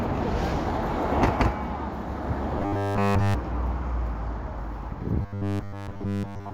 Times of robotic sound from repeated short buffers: 2.58-3.34, 5.22-6.54

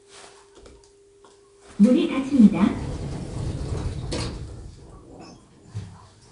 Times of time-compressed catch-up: none

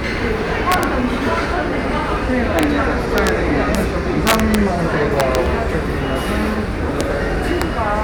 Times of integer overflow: 0.72-0.83, 2.59-2.63, 3.18-3.29, 3.75, 4.27-4.55, 5.20-5.35, 7.01, 7.62

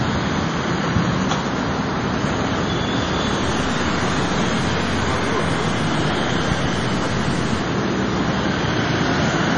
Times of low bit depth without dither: 3.43-7.62

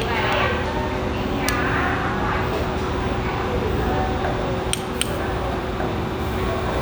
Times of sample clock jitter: 4.57-6.82

